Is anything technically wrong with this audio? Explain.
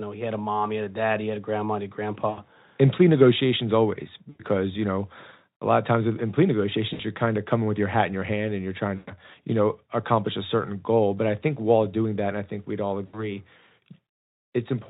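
Yes. VoIP packet loss concealed by the speech codec occurs five times: 2.29–2.42, 4.29–4.41, 6.93–7.02, 8.95–9.13 and 13.05–13.35 s. Packets drop out. The decoder extrapolates from its last pitch and filter while fading the gain. Each gap becomes a brief buzzy tone or coloured noise that dies away. The speech then returns weak or distorted.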